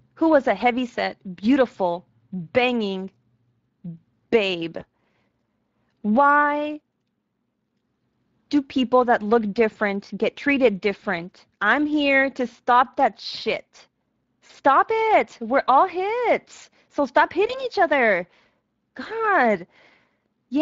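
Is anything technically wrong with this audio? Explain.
Yes. Throughout, the speech sounds hoarse, grainy and noisy. That is Speex codec damage, where a CELP coder starves the excitation of bits at a rate that fits around 20 kbps.

At 4.79 to 4.85 s, 14.47 to 14.51 s and 17.47 to 17.66 s, the speech briefly smears and fades. This is VoIP packet loss concealed by the speech codec. The decoder fills what sounds like a single lost 20 ms frame by extending its last pitch and filter. The effect lingers longest at 17.5 s.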